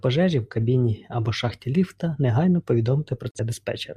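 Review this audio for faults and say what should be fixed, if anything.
Digital broadcast dropout from 3.31 to 3.40 s. The receiver muted when the incoming data failed, leaving a brief silent hole in the speech. About 43 ms of programme is gone for good, consistent with a single corrupted frame. Stronger reception or more robust error protection on the transmission would prevent it.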